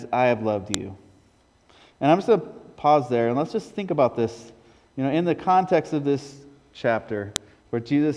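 At 0.74 s a sharp, loud click snaps out of the sound. The same snap returns at 7.36 s. Both are a file header played as audio. Separate WAV pieces were joined without stripping their headers. Those header bytes were read as sample values and played. A few dozen bytes of non-audio data make a brief, hard spike. Each click marks where a new piece begins. It lands regardless of what the sound is doing at that moment.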